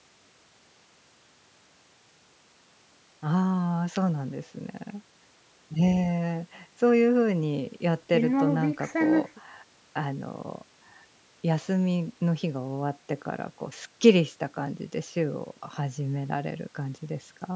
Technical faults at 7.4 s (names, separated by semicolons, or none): none